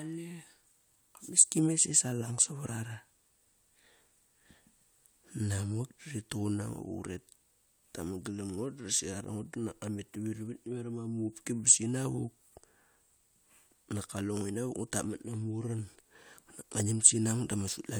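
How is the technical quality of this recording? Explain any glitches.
No technical faults or glitches can be heard anywhere here.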